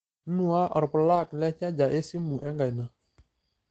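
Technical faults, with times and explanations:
1.07–1.37 s and 2.17–2.55 s, lost packet rebuilt from error correction: the sound carries on with no gap or dropout, but for these stretches it turns coarser and noisier, then clears. Each run of lost packets was replaced by the lower-bitrate copy carried in the following packet, so the real content survives at reduced quality. Plain concealment would instead smear, repeat or fade the sound. The rebuilt stretches are 160 ms and 200 ms long.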